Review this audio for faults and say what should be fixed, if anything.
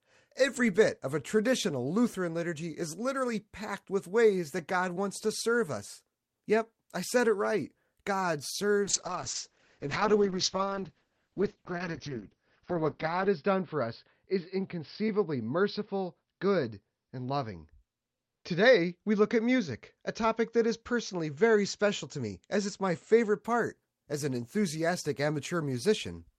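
A call bitrate drop runs from 8.89 s to 23.47 s. The network's bandwidth estimate fell, so the encoder was forced to code the speech far more coarsely, and it sounds rough and muffled. It is at its worst for about 4.4 s, and the quality points to a fall from around 40 kbps to about 7 kbps. On a spectrogram, the upper edge of the energy drops sharply from 20 kHz to 6 kHz, leaving an empty band above it until the bitrate recovers. To prevent this, give the call a more stable link and set a bitrate floor high enough to keep full bandwidth.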